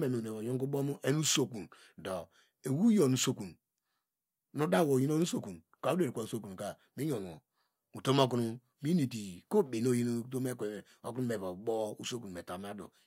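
Listening closely to the speech, nothing stood out as a technical fault at any point.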